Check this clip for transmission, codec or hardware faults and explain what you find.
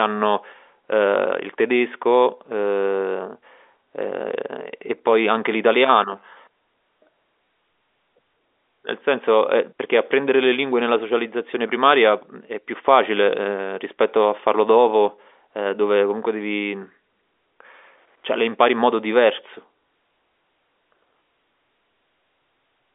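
No faults found.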